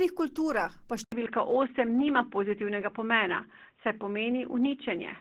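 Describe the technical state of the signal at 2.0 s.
At 2.0 s the sound is coming through a poorer input device. The switch happened at 1.04 s, just after "kulturah pa", with an 80 ms silence. Nothing passes above 3.8 kHz, so the sound is dull and boxy. The level shifts by about 5 dB, and a new noise floor sits roughly 50 dB below the signal. This is most likely a changeover to another microphone or a headset call profile.

The whole clip also carries plainly audible Opus compression damage. The codec itself would pass up to 20.2 kHz, but starved bands are filled by folding and noise, so the sound turns grainy and rough. The hoarse, muffled character points to hybrid mode at a low rate, around 16 kbps.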